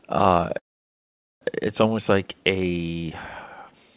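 A call audio freeze runs from 0.58 to 1.43 s in the speech. The last sound is carried on for only a moment before dropping into silence for roughly 0.8 s, the likely result of packets stalling in transit and the jitter buffer running dry. When delivery resumes, the speech picks up exactly where it stopped, so nothing is lost. Everything after 1.43 s simply arrives about 0.83 s later, all of it band-limited to below 4 kHz by the G.711 call path.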